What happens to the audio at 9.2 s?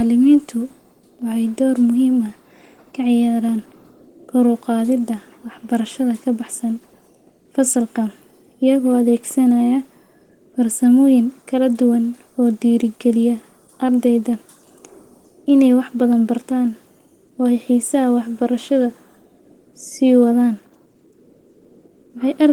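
Opus voice compression, present throughout the clip, is plainly audible here. At 16 kbps in hybrid mode, the speech below 8 kHz is coded coarsely and sounds hoarse and slightly robotic. Unlike a simple low-pass fault, the band stays full up to about 20.1 kHz.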